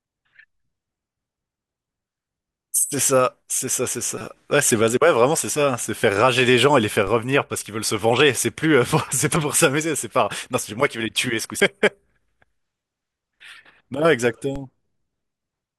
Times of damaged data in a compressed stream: 4.18-4.21, 9.36, 11.60

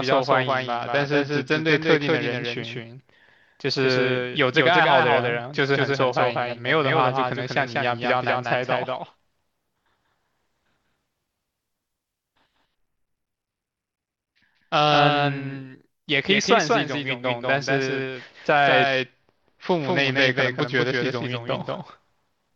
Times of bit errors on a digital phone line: none

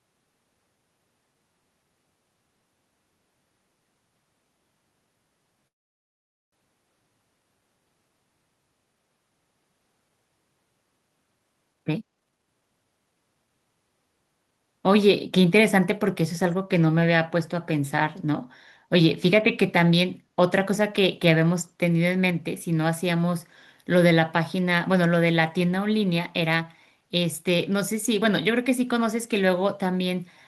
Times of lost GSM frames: none

